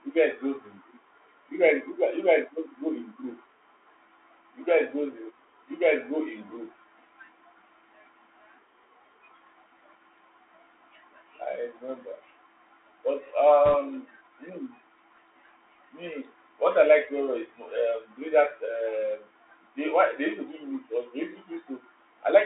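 From start to finish the speech sounds thin and boxed in, with nothing below about 300 Hz or above 3.7 kHz. A fine granular hiss sits under it, and s sounds come out scratchy and rough. This is the Bluetooth CVSD headset codec. It encodes each sample as a single up-or-down bit with an adaptive step size, so fast, bright sounds outrun the step and smear into distortion. The plainly audible damage fits a 64 kbps narrowband link.

From 13.66 to 13.75 s a short burst of rushing, crackly noise breaks through the speech, with no sharp clicks. These are bit errors on a Bluetooth voice link, at a rate of around one and a half percent. Because every CVSD bit carries the same small weight and its error fades out quickly, the corruption comes through as a brief wash of grainy noise rather than loud pops.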